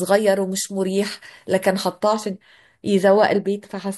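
Pre-emphasis left on, 0.0–2.0 s: uncorrected 50 µs FM boost lifts 10 kHz about 11 dB; speech sounds thin and sibilant, upper spectrogram bands bright.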